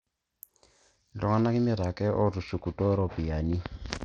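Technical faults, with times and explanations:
Throughout, Bluetooth SBC compression. The speech sounds gritty, and its treble thins out and flickers. The likely cause is a small SBC bit pool starving the upper sub-bands, which fits a link near 80 kbps. Coarse quantisation adds grainy noise.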